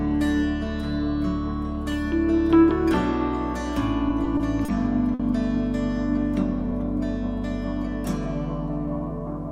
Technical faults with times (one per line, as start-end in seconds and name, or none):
4.09-4.70 repeated stalls (stutter)
5.14-5.21 short stall from a late packet
8.79-9.21 jitter buffer speed-up